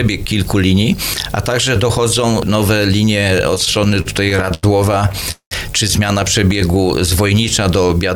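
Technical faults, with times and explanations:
3.55 to 4.65 s: repeated stalls (stutter). Packets arrived late, so the jitter buffer kept running dry. Fifteen short gaps were covered by stretching the last sound, the longest about 87 ms. Nothing is lost, but about a quarter of this span is filler, so the sound drags and jerks.
5.09 to 5.53 s: repeated stalls (stutter). Five more gaps fill over half the span. One wait of about 198 ms is held and faded, giving a stall before the sound catches up.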